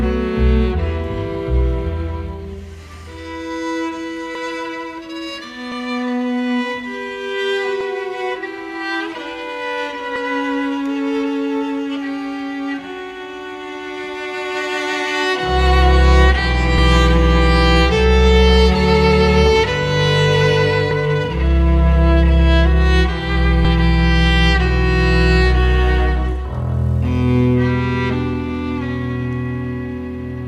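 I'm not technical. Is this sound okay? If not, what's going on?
No. The audio has compressed frames skipped at 4.35, 5.71, 7.80, 10.15, 16.78, 20.91 and 23.64 s. Each time, a short stretch of roughly a twentieth to a tenth of a second is lost, and the sound jumps ahead.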